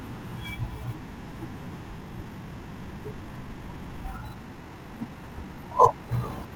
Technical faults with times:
1.96-6.56 time-stretched section

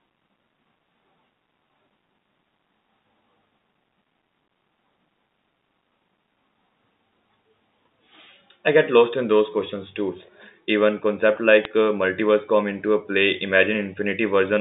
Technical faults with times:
11.64 bit errors on a digital phone line

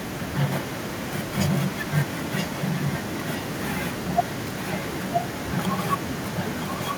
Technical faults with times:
0.51-6.98 echo leak

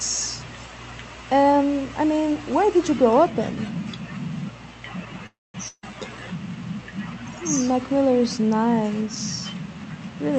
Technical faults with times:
5.26-5.55 call audio freeze
5.68-5.92 burst of packet loss
10.30-10.38 jitter buffer speed-up

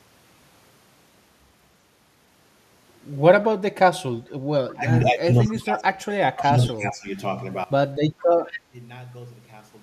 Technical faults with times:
4.73-6.04 speech suppressed in double talk
5.45-5.61 echo leak
6.29-7.16 speech suppressed in double talk
6.44-6.73 echo leak
8.19-8.24 echo leak
8.29-8.43 speech suppressed in double talk
8.51-8.59 echo leak

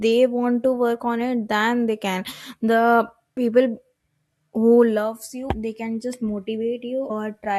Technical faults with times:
3.36 compressed frames skipped
5.49 compressed frames skipped
7.09 compressed frames skipped

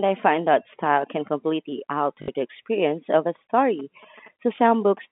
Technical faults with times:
2.22-2.28 packet loss with last packet repeated
3.79-4.99 GSM signalling bursts
4.56-4.58 packet loss with last packet repeated

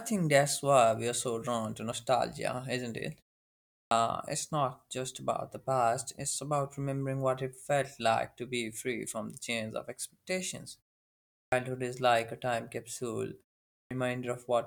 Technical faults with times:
3.79-3.91 clipped start after a pause
11.38-11.52 clipped start after a pause
13.77-13.91 clipped start after a pause

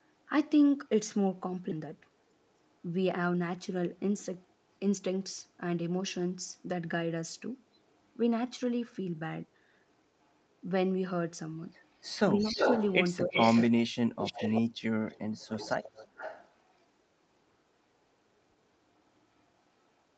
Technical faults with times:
1.71-1.73 skip ahead
1.80-2.54 jitter buffer speed-up
12.10-12.93 echo leak
12.42-12.59 speech suppressed in double talk
13.26-13.37 speech suppressed in double talk
13.33-13.72 echo leak
13.73-14.76 speech suppressed in double talk
14.25-14.62 echo leak
15.09-16.51 echo leak

